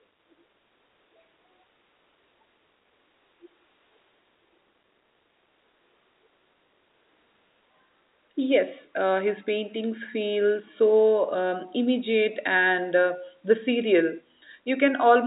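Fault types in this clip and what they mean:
There are no fault types in this clip.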